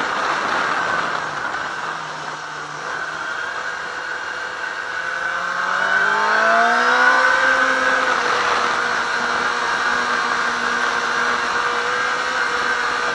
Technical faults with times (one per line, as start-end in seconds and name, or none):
none